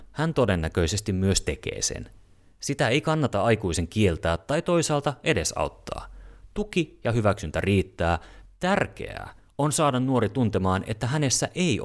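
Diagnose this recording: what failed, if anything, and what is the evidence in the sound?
Nothing failed; no faults heard.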